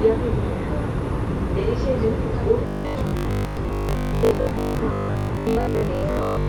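Robotic sound from repeated short buffers runs from 2.67 s to the end at 6.49 s: a rigid 50 Hz metallic buzz, likely from new audio arriving too seldom, so a 20 ms buffer is replayed to cover the gaps and most of the real sound is skipped.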